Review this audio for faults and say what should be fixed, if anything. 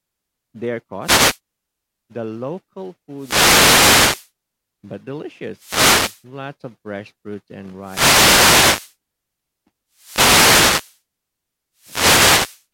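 Wireless microphone noise hits occur at 1.01–1.39, 3.15–4.31, 5.54–6.25, 7.79–8.96, 9.92–11.00 and 11.76–12.65 s, where the FM radio link fades and receiver hiss swells over the speech. Unlike steady background hiss, each hit is heard as a short swish or burst of static. Diversity receivers and clear line-of-sight antenna placement prevent this.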